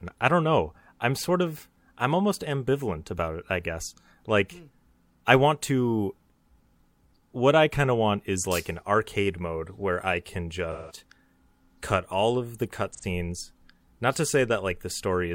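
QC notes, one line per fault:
10.72–10.97 s and 12.92–13.04 s, AAC frame loss with concealment: the speech turns briefly smeared and noisy, a hazy, phasey patch where the detail of the sound goes missing. The first gap lasts about 0.26 s and the second about 0.12 s. The lost audio, about 171 ms and 85 ms, fits runs of four and two AAC frames. The decoder patched each hole by rebuilding it from the last good spectrum.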